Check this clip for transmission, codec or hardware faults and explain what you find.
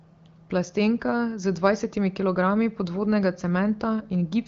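No transmission, codec or hardware faults found: the speech runs through an AMR wideband (HD Voice) path with nothing above about 7.2 kHz and only light coding texture, which fits a rate around 15.85 kbit/s.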